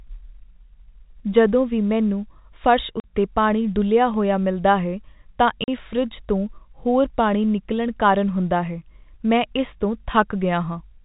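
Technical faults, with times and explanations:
3.00 to 3.04 s and 5.64 to 5.68 s, packet loss filled with silence: the speech drops out abruptly for 40 ms each time, right after "ਜਦੋਂ ਵੀ ਮੈਨੂੰ ਫਰਸ਼" and again after "ਹੋਇਆ ਮਿਲਦਾ ਹੈ ਤਾਂ". Stretches of the stream never arrived and the receiver inserted dead silence, so the waveform snaps to silence and back. The 40 ms gaps fit two lost 20 ms packets, heard against the 4 kHz-limited telephone band of G.711.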